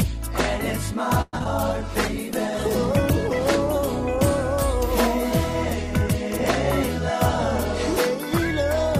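At 1.21 s the sound stalls for about 0.13 s in a call audio freeze, most likely because packets were held up in transit and the jitter buffer ran dry. The receiver stretches the last sound into a fading buzz for roughly 114 ms, with about 20 ms of near-silence at the end, before playback resumes at 1.35 s. Nothing is lost; the material is pushed later, adding about 114 ms of delay from that point on.

Right after, two short concealed packet loss events follow at 1.39 to 1.42 s and 1.44 to 1.47 s. Each time about 20 ms of audio failed to reach the decoder, and the receiver bridged the hole by extrapolating from the preceding sound, roughly 10 ms of synthesised fill per event. Back to back, they come across as a pair of quick smears or wobbles.

From 1.67 s to 3.65 s a call bitrate drop sets in. The encoder's target falls from 32 kbps to 15 kbps and stays at the lower rate for about 1.9 s. 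Opus codes the signal more coarsely at that rate and trims the upper frequencies, so the sound turns duller and rough or watery across that span until the rate recovers.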